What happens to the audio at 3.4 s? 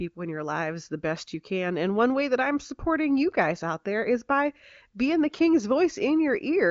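Nothing goes wrong at 3.4 s: the speech there is intact, carried cleanly by the AMR wideband (HD Voice) codec, with the band ending around 7.4 kHz as expected for that path.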